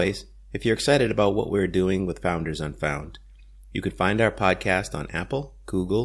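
A short speech recording with no technical faults to report. Nothing in it calls for a time, a cause or a measured value.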